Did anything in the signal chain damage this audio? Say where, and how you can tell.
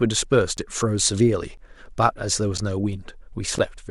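Yes: evenly spaced ticks about once per second from 0.57 s to 3.6 s, each a roughly 10 ms silent gap in the speech, pointing to periodic USB or driver dropouts at the driver stage.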